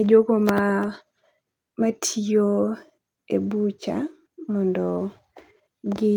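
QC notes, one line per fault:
No technical faults are audible in the speech signal across the whole clip.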